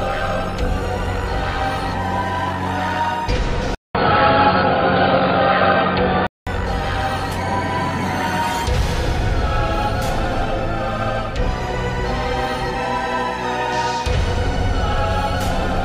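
From 3.75 to 6.47 s the audio turns dull and boxy, with nothing above 4.8 kHz, a faint new background noise and a shift in level after a 0.2 s gap, likely an input switched to a poorer device.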